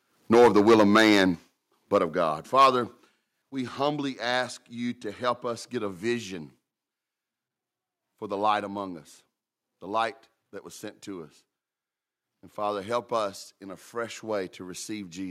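From 0.33 to 1.24 s the speech shows microphone overload, driven about 10 dB past the converter's limit, so peak tops are flattened into a harsh crackle. A short clipped burst follows at 1.94 to 1.97 s (about 3 dB over), and another at 2.57 to 2.67 s (about 6 dB).

Interleaved come microphone volume step-downs: sudden drops where voice and background fall together. They land at 0.35 s (about 2 dB), 1.35 s (about 5 dB), 2.4 s (about 2 dB), 3.42 s just before "we humbly ask you" (about 6 dB), and 8.64 s between "for the light" and "among us the light" (about 2 dB). The likely cause is call software lowering the input gain after sensing clipping.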